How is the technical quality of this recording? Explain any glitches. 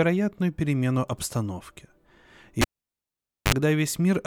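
The recording has one clear glitch: a cable pulled and plugged in between 2.61 and 3.54 s. A live connector was yanked out and reinserted. A pop cuts the speech to near silence for about 0.88 s. A 59 ms burst of 50 Hz mains buzz follows as only the plug tip makes contact, then a second pop as the sound returns.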